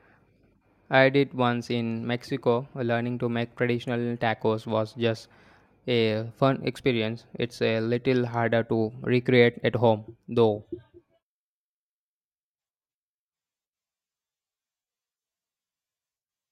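No technical faults can be heard anywhere in the recording.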